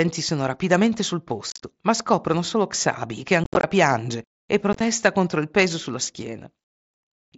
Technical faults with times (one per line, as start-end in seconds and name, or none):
1.50-1.60 unconcealed Bluetooth headset packet loss
3.44-3.64 unconcealed Bluetooth headset packet loss
4.73-4.81 unconcealed Bluetooth headset packet loss
7.07-7.11 unconcealed Bluetooth headset packet loss